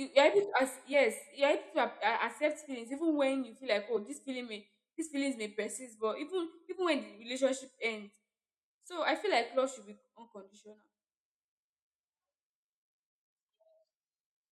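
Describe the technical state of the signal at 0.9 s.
At 0.93 s, between "you're able to as" and "you're able to", damaged data in a compressed stream makes the decoder lose frame sync, producing a brief glitch: a waveform discontinuity.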